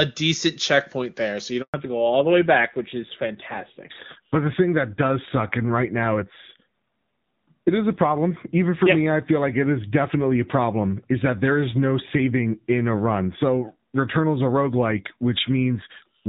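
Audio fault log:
1.62–1.74 s, handover gap: the speech fades out within a few tens of milliseconds and stays fully silent for 120 ms, so whatever was said in that window is gone. No speech frames reached the decoder while the call moved between networks. Unlike packet loss concealment, there's no smeared or buzzy fill-in, just clean silence. Unlike a mute or a line drop, the sound returns with a changed bandwidth, marking the network switch.
1.74 s to end, fallback to narrowband: from the return after the gap onward, nothing above 4 kHz remains, so sibilants and breath lose their air and the speech sounds duller and rougher. Before 1.62 s the wideband HD Voice quality is clear with at most faint coding traces. The call dropped to an older narrowband codec, and the roughness points to a low rate near 7.4 kbit/s. A plain low-pass filter would dull the sound without adding this coarse, gritty texture.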